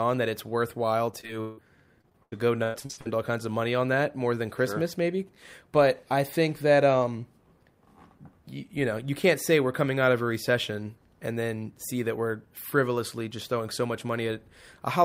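From 1.11 to 1.59 s and again from 2.01 to 3.07 s, the speech breaks into repeated packet loss with a robotic sound. Audio keeps dropping out. Each hole is bridged by stretching the last sound, and the longest runs about 165 ms. Speech turns choppy.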